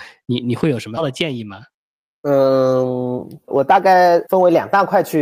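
At 0.97 to 0.99 s the speech has a skip ahead. Roughly a second of audio was thrown away, and playback jumps straight to the later material with no silence or fill between the two sides. That abrupt join sets it apart from a dropout, which leaves an audible gap or muted stretch. Here the sound simply lurches forward, with the missing portion gone and the surrounding speech spliced almost directly together.

From 1.11 s to 5.16 s a jitter buffer speed-up follows. The receiver was holding more audio than it wanted and trimmed short pitch-period-sized pieces again and again, shedding roughly 400 ms in total. The speech runs at about 110% of normal rate and sounds hurried. The pitch stays where it was, which separates this from a resampling or clock-rate error, where faster playback would also raise the pitch.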